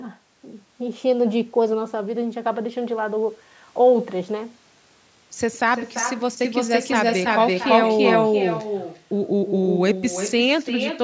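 From the very start, every phrase has a trailing shadow about a third of a second behind it, sitting about 7 dB down and sounding thinner. That's echo with no canceller: the far end's loudspeaker feeds the microphone and the round trip sends it straight back.

Between 6.45 and 8.61 s a second, harder copy joins in, also roughly a third of a second late but about as loud as the original, dry and full-band within the 8 kHz call bandwidth. It cuts in and out abruptly, which points to a doubled audio track, likely a second capture path mixed in out of step.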